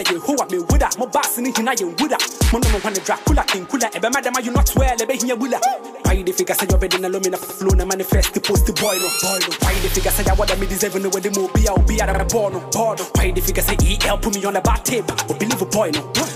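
At 7.41 s there's a quick stutter from repeated frames: a short block of about 60 ms gets played twice more, which fits a small run of compressed frames being written or sent again, so the sound loops in place before moving on and the audio stretches by about 0.14 s. It happens again at 12.13 s, with a shorter block of about 39 ms repeated twice, adding roughly 0.1 s.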